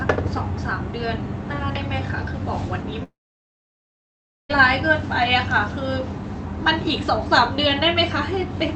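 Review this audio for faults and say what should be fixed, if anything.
At 3.03 s the speech breaks off. A short buzz carries the last sound on and fades fast. Then there is about 1.36 s of silence until 4.51 s. When the speech resumes, about 1.46 s of it is missing. This is a long network dropout, likely packets lost in transit. The receiver's concealment filled the gap briefly, then gave up. To prevent it, use a steadier network link and enable forward error correction on the call.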